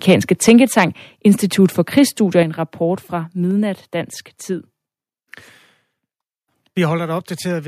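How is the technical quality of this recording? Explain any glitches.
The recording has two recurring problems: distorted peaks and sudden level drops.

Microphone overload occurs from 0.08 to 0.84 s and again from 1.97 to 1.99 s, just before "i en rapport fra". The input was likely set too high, so peaks overshoot the converter's limit by about 5 dB and then about 1 dB. Their tops are sliced off, giving a harsh crackle.

Microphone volume stepped down happens at 0.49 s, 2.43 s (just before "en rapport fra") and 4.53 s. Software likely reacted to the loud input by cutting the gain in single steps of about 4, 7 and 2 dB. The level drops abruptly each time.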